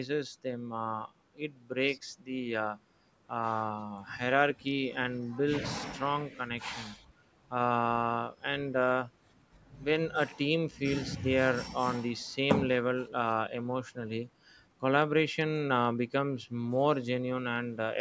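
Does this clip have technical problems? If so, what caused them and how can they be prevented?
No, nothing here calls for a fix: the speech has simply been through a call's microphone processing, which trims the lowest bass with its high-pass filter and leaves no content above 8 kHz, both normal for that path.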